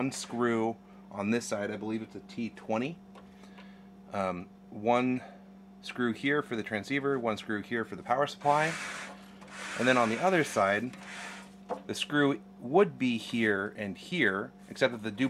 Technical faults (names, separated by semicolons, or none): none